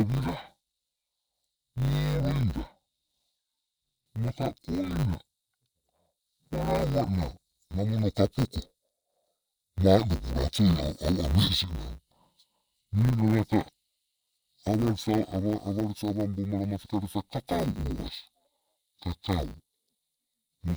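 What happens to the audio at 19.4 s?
At 19.4 s the speech is still affected by interleaved audio read as planar, a fault that runs through the whole clip. Each 10 ms block of alternating left and right samples is split in half and read as if the first half were left and the second right, so both channels play every sample stretched to half speed. With blocks this short, the speech sounds dull and robotic, with a 100 Hz buzz at the block rate and no clear octave drop.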